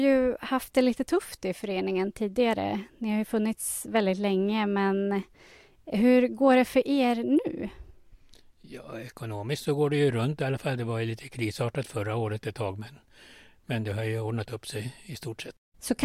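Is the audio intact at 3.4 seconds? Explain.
Yes, the audio is intact at 3.4 seconds, with the speech running through that moment without any audible fault.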